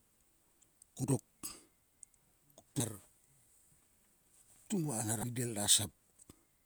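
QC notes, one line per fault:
1.04 s, 2.80 s and 5.20–5.24 s, damaged data in a compressed stream: brief glitches where corrupted frames made the decoder misread data and hunt for the next frame header.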